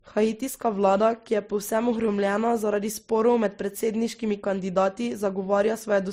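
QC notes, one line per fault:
Throughout, transcoding between lossy codecs: the speech carries two overlapping layers of coding damage, with nothing above 16 kHz. The first encode is the likely source of the earlier artefacts, and the final Opus pass spends bits re-encoding those artefacts while adding its own, so both are heard together. The sound points to a low-rate MP3 stage near 41 kbit/s feeding an Opus encode around 48 kbit/s.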